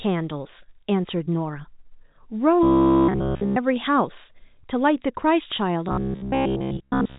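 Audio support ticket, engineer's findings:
Robotic sound from repeated short buffers, 2.63 to 3.58 s. Rigid metallic buzz at 66.8 Hz. Signal entirely repeated, real audio skipped.

Same fault, 5.89 s to end of clip. Same 66.8 Hz buzz. Most of the signal repeated.

Likely cause: audio arriving too seldom, playout looping a roughly 15 ms chunk. Loop length sets the forced pitch. G.711 telephone path sounds normal, with nothing above 3.8 kHz.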